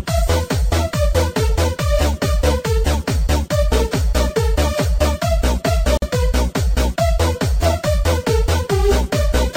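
The sound breaks off for about 48 ms, from 5.97 to 6.02 s. This is a gap at a join of encoded pieces. The silence has edges smeared by the codec, and the sound resumes exactly where it stopped. The audio was encoded in separate pieces and joined without trimming. The encoder's start-up delay and last-frame padding both stayed in. The gap's position fits pieces about 6 s long.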